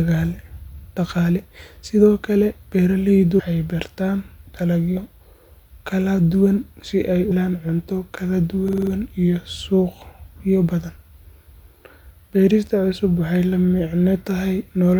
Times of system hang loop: 8.68-8.92

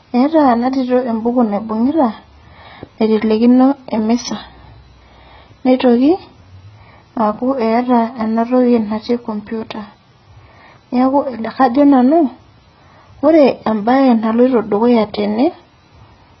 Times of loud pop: none

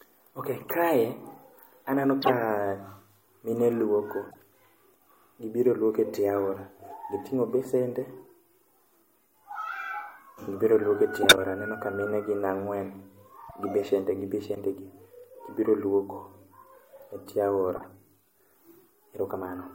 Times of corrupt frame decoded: 0.61-0.73, 2.22-2.30, 4.31-4.36, 11.23-11.38, 13.48-13.60, 14.55-14.57, 17.76-17.87

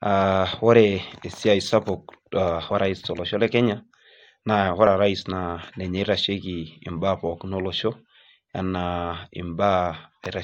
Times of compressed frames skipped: 2.70

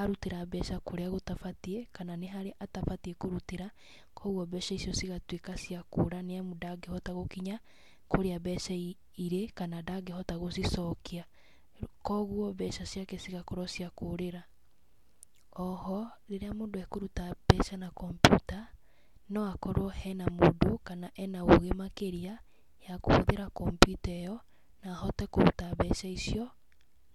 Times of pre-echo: none

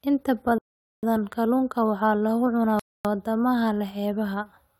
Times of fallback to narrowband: none

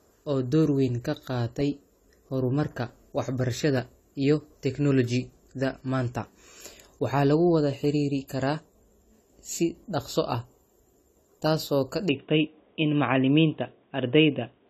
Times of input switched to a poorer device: 12.09-14.69

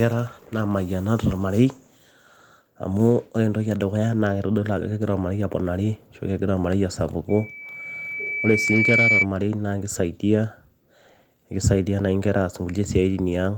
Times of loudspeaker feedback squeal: 7.29-9.26

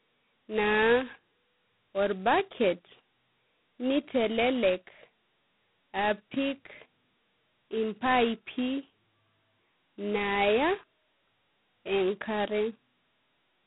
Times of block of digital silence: none

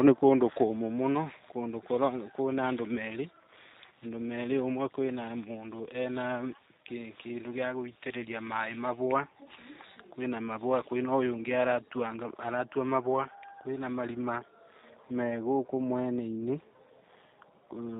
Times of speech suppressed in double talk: none

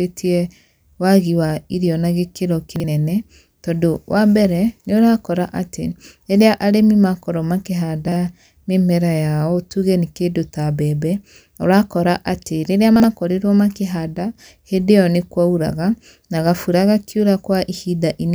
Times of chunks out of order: 2.76-2.84, 8.08-8.16, 12.96-13.04

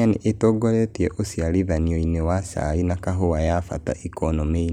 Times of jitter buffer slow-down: none

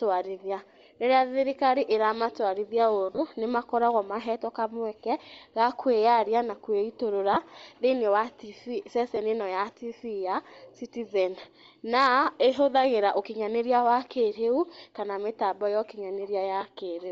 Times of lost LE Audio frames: 3.12-3.18, 7.34-7.37, 9.16, 16.61

